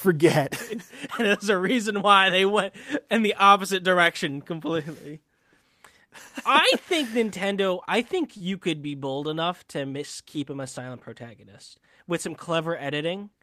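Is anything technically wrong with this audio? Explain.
Yes. At 8.37 to 8.42 s there is a short stall from a late packet. The jitter buffer ran dry, so about 29 ms of the last sound was stretched, briefly holding it with a slight buzz or dip.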